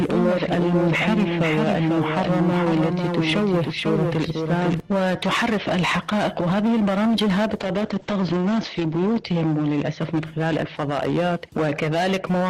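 From the very start until 4.8 s, every sound is followed about half a second later by a full-band copy roughly 5 dB quieter, with no decay or room colour, and it stops abruptly. This is a doubled audio track, likely a second capture arriving late or two misaligned copies in an edit. From 7.58 s to 10.57 s the audio turns rough and watery and loses its top end, with bandwidth falling from 20 kHz to 8 kHz and the worst stretch lasting 1.43 s. This points to a call bitrate drop from around 32 kbps to around 9 kbps, where a falling bandwidth estimate forced the Opus encoder to code more coarsely and cut the high frequencies until the rate recovered.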